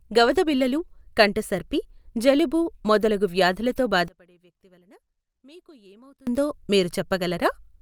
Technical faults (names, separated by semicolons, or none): one channel inverted